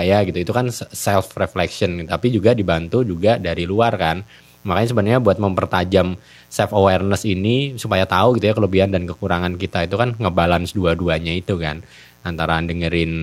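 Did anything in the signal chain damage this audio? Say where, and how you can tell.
Yes, in the analogue wiring: a mains buzz runs under the speech for the whole clip, sitting roughly 35 dB below it. It is raspy rather than a smooth hum, because sharp switching spikes from a dimmer, rectifier or unshielded run enter twice per cycle of a 60 Hz supply, spreading harmonics up to several kHz. That bright, edgy texture separates it from a pure ground-loop hum. Its steadiness from start to end rules out an intermittent interference source.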